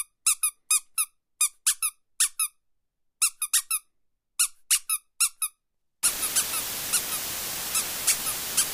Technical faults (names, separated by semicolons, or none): low bit depth with dither